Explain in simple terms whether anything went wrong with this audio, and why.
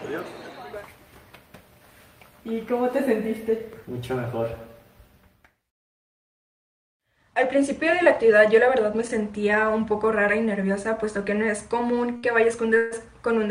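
Right near the end, at about 12.17 s, there's a short stall from a late packet. A chunk of audio didn't arrive in time, so the player ran out of material and stretched the last bit of sound for about 63 ms until the packet showed up. Then it picked up exactly where it left off, so nothing's actually lost. You just hear a sound hang on a touch too long, maybe with a faint buzz.

Half a second later, from 12.77 to 12.94 s, there's a call audio freeze. The sound holds and smears into a buzzy continuation for about 140 ms. It never drops to silence. Then it resumes from the same spot, so again nothing goes missing. The likely cause is a batch of packets getting held up on the network, which left the player with nothing new to play and forced it to stretch out what it already had.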